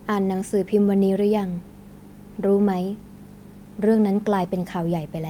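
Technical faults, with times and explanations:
No technical faults can be heard in this speech recording. There is nothing to time or explain.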